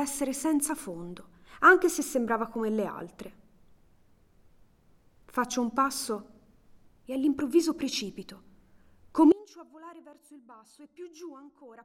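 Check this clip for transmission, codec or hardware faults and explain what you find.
One fault is present. At 9.32 s an audio dropout to a faint residue begins and lasts to the end: the signal cuts abruptly to a faint leak roughly 25 dB down, likely a lost feed into a still-live path.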